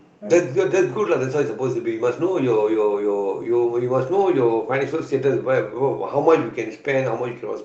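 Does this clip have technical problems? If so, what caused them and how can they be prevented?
No, this speech clip has no technical problems.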